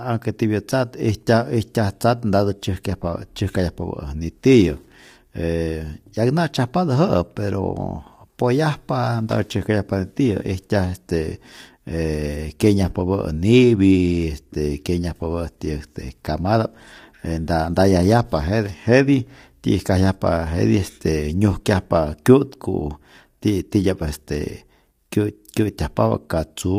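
The speech in this clip has most likely passed through low-delay AAC compression, the AAC-ELD mode used in video calls, at a rate that fits roughly 32 kbps. Its short frames cannot resolve the pitch harmonics cleanly, so throughout the recording the voice is plainly rough and grainy, with noise filling the gaps between harmonics and a thin, synthetic-sounding top band, while nothing at all appears above about 23.3 kHz.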